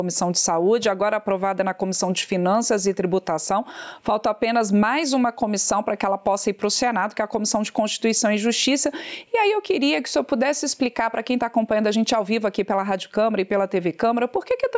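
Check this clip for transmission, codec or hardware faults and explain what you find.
One fault runs through the whole clip: gain pumping. The input gain is likely set far too high, so a fast limiter clamps every loud sound, dropping the level by around 10 dB. Unlike a noise gate, pumping does not cut the sound to silence. The call's microphone processing keeps everything below 8 kHz.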